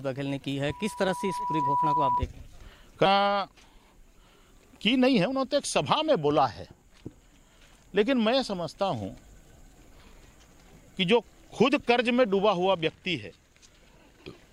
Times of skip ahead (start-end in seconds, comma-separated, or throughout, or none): 3.05-3.07